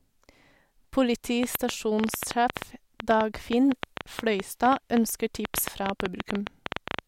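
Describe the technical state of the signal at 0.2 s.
At 0.2 s the speech signal is intact, with no audible technical fault at that moment.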